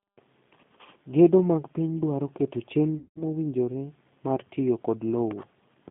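The whole clip runs through a G.729 codec. The speech is band-limited to roughly 150 Hz to 3.6 kHz, and nothing above that survives. The codec rebuilds each frame from a vocal tract filter, a pitch predictor and a few coded pulses. That model leaves the voice plainly rough and slightly synthetic. The thin, rough texture fits an 8 kbit/s G.729A stream.

From 2.98 to 3.19 s there is VoIP packet loss concealed by the speech codec. About 180 ms of audio is missing, which fits a run of six lost packets. The decoder fills the gap by repeating its last pitch and filter at falling gain. The sound smears into a buzzy tone or coloured noise that fades. Because each frame builds on the previous one, the voice stays weak or distorted for a moment after the gap.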